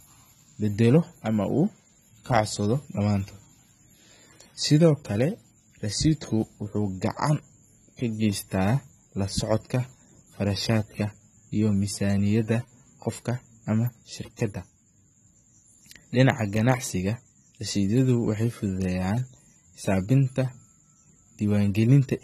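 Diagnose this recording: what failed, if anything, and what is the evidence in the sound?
The codec stage failed, across the whole clip: the speech sounds dull and smeared, sibilants go fizzy and warbly, and nothing survives above 14.1 kHz. That's likely AAC compression, which fits AAC-LC around 32 kbps, quantising coarsely and cutting the top band.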